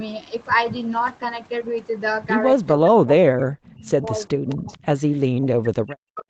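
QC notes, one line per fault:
2.77 to 4.2 s and 4.38 to 6.3 s, speech suppressed in double talk: the voice drops out in chunks, sometimes by around 40 dB, likely the echo canceller ducking everything while both sides talked.
4.7 to 4.79 s, echo leak: a short, faint copy about 30 dB down arrives 0.44 s late, likely loudspeaker pickup the far-end canceller didn't fully remove.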